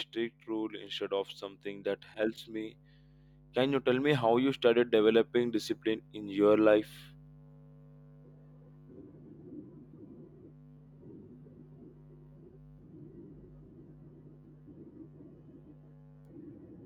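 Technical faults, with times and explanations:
3.54 to 6.92 s, automatic gain rising: across these 3.4 seconds the level climbs by about 7 dB as the automatic gain control decides the input is too quiet and keeps raising its gain. Because the gain acts on the whole signal, the speech and the background noise swell together instead of the voice alone growing louder. On the waveform the envelope widens steadily through this span. On a spectrogram the whole frequency range brightens evenly, the noise floor between syllables included.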